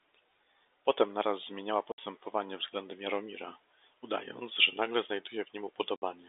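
Speech over a G.711 telephone path, limited to roughly 300 Hz to 3.7 kHz, with packet loss filled with silence at 1.92 to 1.98 s and 5.96 to 6.02 s. Each 60 ms hole has hard edges, which fits three lost 20 ms packets replaced by silence.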